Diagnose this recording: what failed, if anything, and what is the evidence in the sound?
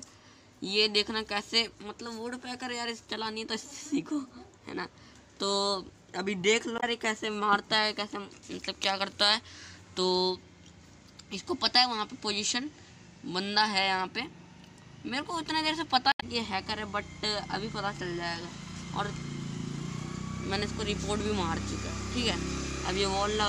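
Two brief glitches break the sound, at 6.75 to 6.84 s and at 16.09 to 16.23 s, each lasting roughly a tenth of a second. This is damaged data in a compressed stream, at the codec stage: corrupted bytes make the decoder misread frames, lose sync and hunt for the next valid header.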